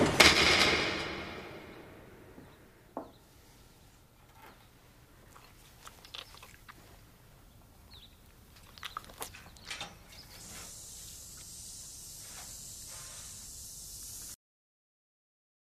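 At 14.34 s the sound stops abruptly in a cut-off end: final buffers never played, so the waveform drops straight to a flat line and the spectrogram goes blank without decay.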